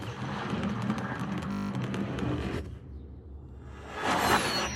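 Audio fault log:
1.52–1.70 s, system hang loop: a single 20 ms slice of the sound repeats exactly nine times while the system stalls and the hardware keeps replaying its ring buffer, which fits a 20 ms buffer. Because the slice is so short, the repeats fuse into a steady 50 Hz buzz. Unlike mains hum, it starts and stops abruptly and carries the timbre of the looped audio. Little or nothing seems to be skipped when playback resumes.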